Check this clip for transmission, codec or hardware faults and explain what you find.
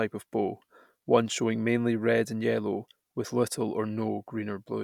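No transmission, codec or hardware faults can be heard anywhere in the speech, so the signal reaches the listener intact.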